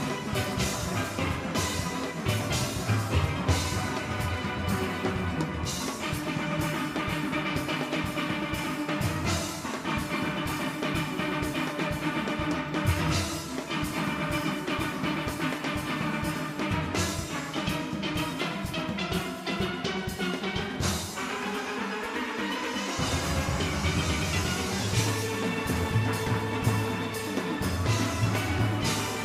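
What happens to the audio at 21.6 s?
Nothing goes wrong at 21.6 s; the audio plays through that moment intact, with no break, distortion or other fault.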